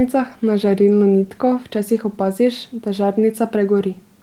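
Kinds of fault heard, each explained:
No faults found in the speech.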